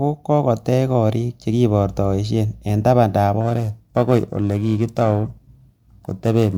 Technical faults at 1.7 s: none

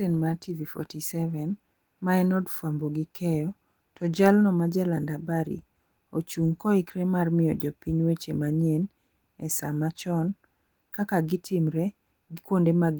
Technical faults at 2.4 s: none

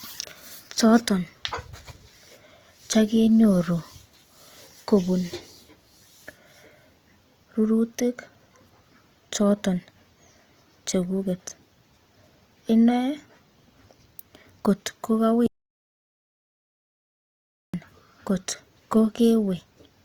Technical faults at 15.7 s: Opus compression; audio dropout to silence

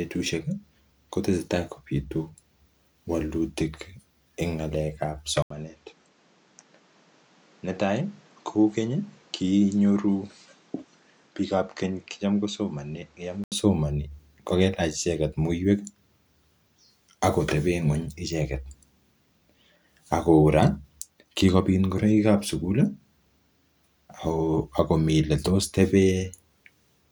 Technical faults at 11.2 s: input switched to a poorer device

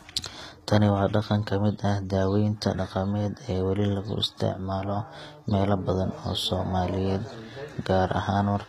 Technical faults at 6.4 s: HE-AAC compression

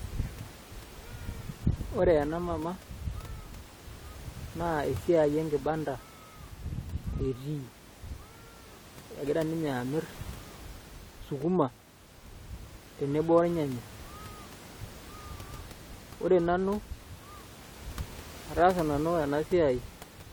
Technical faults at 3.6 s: none

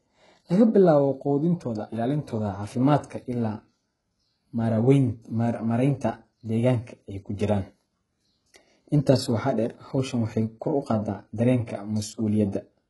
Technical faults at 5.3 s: HE-AAC compression

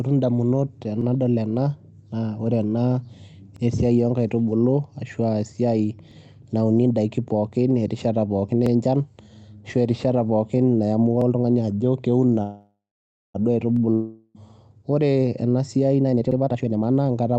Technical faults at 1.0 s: overlapping chunks

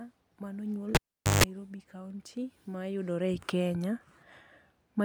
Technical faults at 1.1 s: cable pulled and plugged in

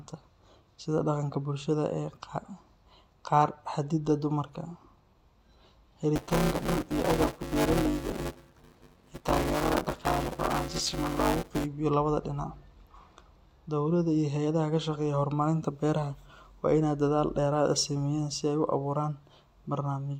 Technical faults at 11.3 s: buffer tearing

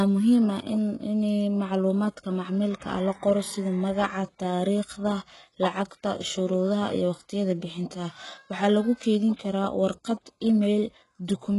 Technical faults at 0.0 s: HE-AAC compression

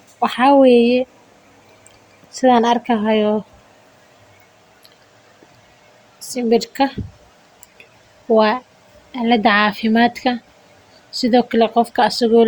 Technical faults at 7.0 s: none

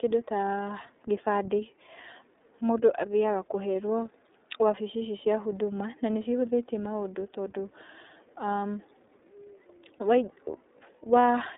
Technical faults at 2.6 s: iLBC codec

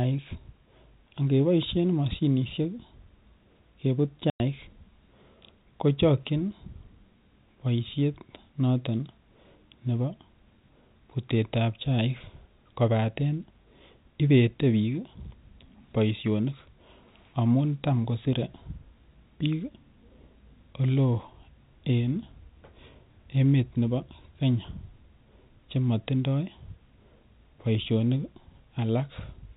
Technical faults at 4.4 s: packet loss filled with silence

